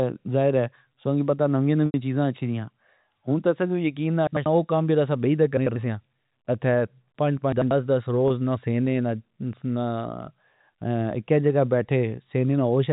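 From 1.86 to 1.94 s, between "کی پتا نویا" and "چیزا اچھی ریا", there is packet loss with pitch repetition. About 80 ms of speech is missing, which fits four 20 ms packets. The receiver fills the gap by repeating the last pitch period and fading it out. The gap outlasts that fade, so the sound thins into a brief silence. Speech then returns with a short cross-fade.

Chunks play out of order at 4.27 to 4.46 s, 5.57 to 5.76 s, and 7.52 to 7.71 s, the last just after "سیا ات پنج". Each chunk is about 93 ms long and plays one chunk late. So it comes after the audio that should follow it. Nothing is lost, but the order is scrambled. Each spot sounds like a jumbled moment.

From 8.28 to 8.30 s, just before "نا سینے", a second packet loss with pitch repetition covers about 20 ms, one packet's worth. This gap is shorter than the fade. So the repeated pitch period is heard as a slightly held, buzzy sound rather than silence. 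All of this sits inside G.711 A-law telephone audio, with nothing above 4 kHz.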